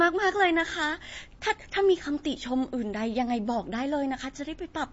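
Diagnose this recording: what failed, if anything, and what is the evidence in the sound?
Codec stage, likely MP3 compression: the speech sounds watery throughout. The spectrogram stops flat at 7.7 kHz, with weak bands flickering on and off, which fits a starved bitrate near 32 kbps.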